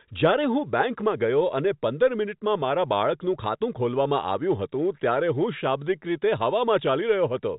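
No faults are audible in this speech; it carries the expected G.711 telephone coding character, with nothing above 4 kHz and only faint level-tracking quantisation noise.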